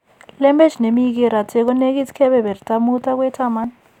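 Speech with audio missing between chunks at 0.70, 1.68 and 3.64 s. Each joined skip loses about 20 ms, before and after "ne mi keeraate", likely at one-second chunk boundaries.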